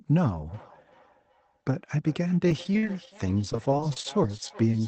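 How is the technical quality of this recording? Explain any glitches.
The recording has two clear problems: a feedback echo that runs through almost the whole clip, and two bursts of choppy, robotic sound from repeated packet loss.

The feedback echo between two devices starts at about 0.48 s and continues to the end. A second device in the room replays the call, and this microphone picks it up again. Its canceller ignores that sound, so each phrase returns roughly every 0.4 s, up to about 22 dB below the speech. The fixed repeat spacing sets it apart from room reverberation, which smears sound continuously rather than in distinct repeats.

Repeated packet loss (robotic sound) occurs from 2.48 to 3.08 s, then from 3.53 to 4.74 s. Audio kept arriving late or not at all, and each hole was patched by stretching the previous sound. This gives a robotic, stuttering texture with pieces missing. 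The longest gap is 41 ms in the first burst and 24 ms in the second. Unlike the echo, nothing repeats. The sound breaks up in place.

Through all of this, the call codec limits the top end to around 8 kHz.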